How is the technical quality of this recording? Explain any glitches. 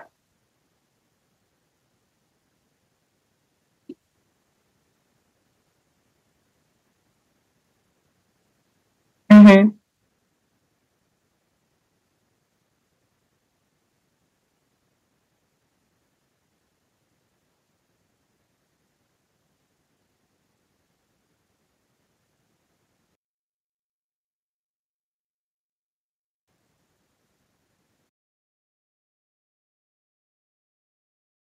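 The recording has three audible problems: a burst of distortion, a small level drop at the same moment, and a stretch where the sound nearly vanishes.

From 9.31 to 9.55 s there is microphone overload. The peaks drive roughly 8 dB past what the converter can represent, most likely because the input volume was set too high, so their tops are sheared off, with around two fifths of the waveform pinned at the converter's limit. It sounds like a harsh, crackling edge on the loudest moment. On a waveform the peaks appear as flat plateaus. A spectrogram shows a smear of added high-frequency energy across that quarter-second.

At 9.32 s the microphone volume steps down by 2 dB in a single jump. Most likely the call software detected that same clipping and lowered the device's input gain to protect against further overload. Level falls suddenly. It is a modest change, heard as the sound and background becoming slightly quieter at once. 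The waveform envelope shows a small, abrupt step rather than a gradual fade.

From 23.15 to 26.48 s one channel is inverted. One stereo channel has reversed polarity, likely somewhere in the capture or routing chain, so when the two channels are summed to mono, everything common to both cancels. The level drops by about 33 dB, leaving only a faint residue of the channel difference. On a waveform this is a near-flat stretch, and a spectrogram shows the band almost empty for those three seconds.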